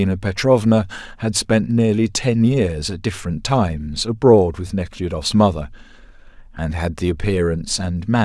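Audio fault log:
No fault is heard in this speech clip.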